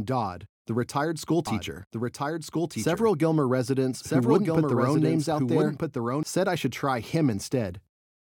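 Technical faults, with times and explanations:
1.47–6.23 s, doubled audio track: a full-band copy of the speech trails roughly a second and a half behind, about 5 dB quieter, likely from a second capture path or misaligned edit. Spectrograms show repeated harmonic patterns, time-shifted, starting and stopping abruptly without decay.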